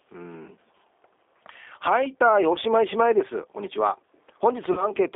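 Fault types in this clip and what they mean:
G.729 codec: rough, synthetic speech coding confined to about 300 Hz to 3.6 kHz throughout, fitting an 8 kbit/s G.729A stream, grainier than simple telephone band-limiting.
VoIP packet loss concealed by the speech codec: fading fill-ins at 2.53 s and 4.73 s covering 20 ms and 40 ms losses, not silent dropouts, with weakened sound lingering until 2.58 s and 4.88 s.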